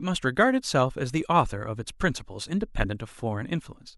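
Damaged data in the compressed stream at 2.45 to 2.49 s: corrupted bytes make the decoder misread frames and lose sync, producing a brief glitch in the speech.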